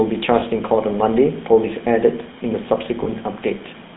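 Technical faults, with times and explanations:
Throughout: GSM full-rate codec. The speech passes through the early GSM coder, which models the vocal tract and excites it with sparse, regularly spaced pulses at what sounds like 13 kbps. The band is confined to roughly 150 Hz to 3.7 kHz, and the coarse excitation leaves a plainly audible buzzy, gravelly roughness.
0.40–0.43 s and 3.04–3.08 s: lost GSM frames. Each time, a single damaged 20 ms frame was replaced by repeating the previous good frame's parameters, so the sound briefly freezes into a short, rough, metallic ring before normal decoding resumes.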